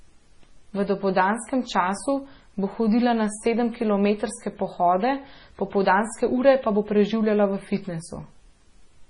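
Speech throughout shows the marks of heavy MP3 compression, likely from a starved encoder at a bitrate that fits roughly 24 kbps: treble is cut off sharply at 10.6 kHz, and weak frequency lines flicker frame to frame, giving a watery, swirly texture, chirpy s sounds and smeared consonant attacks.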